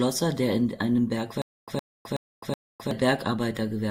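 From 1.42 s to 2.91 s the speech hits a stutter with silent gaps: a 114 ms snippet repeats four times, each followed by about 260 ms of dead silence, so it ticks along every 374 ms. That's likely a stalled stream replaying its last fragment, and the real audio in between is lost.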